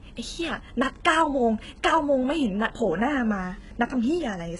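From start to finish the treble sounds rebuilt rather than real, with gritty, lispy s sounds and nothing above 11 kHz, likely heavy HE-AAC compression at a very low bitrate, around 12 kbps.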